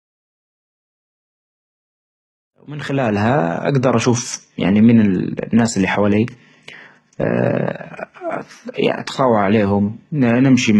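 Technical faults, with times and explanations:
Throughout: HE-AAC compression. The speech has nothing above 11.8 kHz, and the treble sounds rebuilt rather than captured. S sounds come out gritty and lispy, with a metallic edge where upper harmonics fail to line up with those below. The likely cause is spectral band replication: only the lower spectrum is coded, and the top is filled by copying lower bands upward under a coarse envelope. The heavy damage fits a bitrate around 16 kbps.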